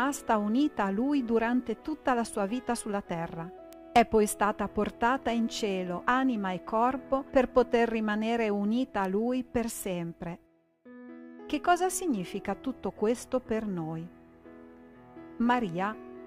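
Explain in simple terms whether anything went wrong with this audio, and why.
Three isolated clicks at 3.73, 9.05 and 15.69 seconds are bit error spikes. In each case a single binary digit in the stored or transmitted audio data got flipped, so for an instant the sound value jumped far from where it should be and then snapped back. That sudden jump is heard as one short, sharp tick that has nothing to do with the surrounding sound. The clicks get progressively quieter from the first to the last.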